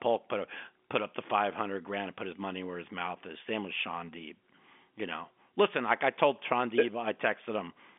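Nothing stood out on listening; the speech sits within the narrow band of an ordinary telephone line, with nothing heard above about 3.7 kHz.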